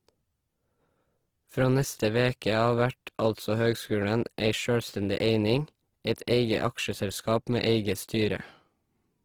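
Throughout, the speech sounds grainy and rough, with noisy band texture. This is likely Opus compression at a low bitrate, near 16 kbps, with bands filled by folding or noise.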